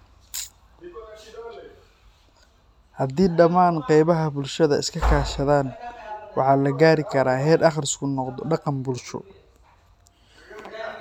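No technical faults can be heard in the speech at any point. Nothing in the recording calls for a time-stamped note.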